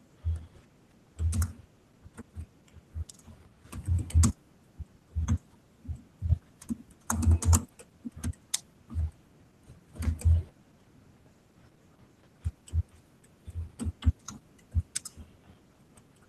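Nothing technical goes wrong anywhere in this speech recording, so there's nothing to flag.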